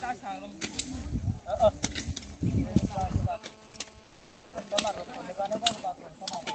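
The audio came through a call path whose band stops near 8 kHz, and it carries two faults. From 2.51 s to 5.82 s there is GSM phone buzz, a hard, raspy tone repeating at about 217 Hz and sitting about 24 dB below the signal. A nearby 2G handset in an active call transmits in bursts at that rate, and the audio circuitry rectifies each radio pulse. That is why the buzz stays steady throughout this stretch. On a spectrogram it shows as evenly spaced horizontal lines at 217 Hz and its harmonics, and the waveform shows regular sharp pulses roughly every 4.6 ms.

Between 4.03 s and 4.53 s, a 500 ms stretch of background is replaced by comfort noise. This is steady, featureless hiss about 5 dB quieter than the real background, which lies about 25 dB below the loud parts. The likely cause is Opus discontinuous transmission: the sender stopped sending during the pause and the receiver filled it with synthetic noise. 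On a spectrogram this appears as a smooth, uniform patch with the background's fine detail gone, and in the waveform as a flat, even band.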